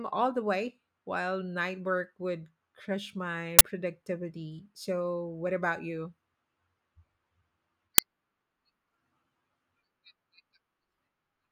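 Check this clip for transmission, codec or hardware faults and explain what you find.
Two short bursts in this speech clip come from an uninitialised buffer: 3.59 to 3.61 s, right after "work would crush my", and again at 7.98 s. A block went out before audio was written to it, so leftover memory played as harsh digital noise lasting 20 ms and 5 ms.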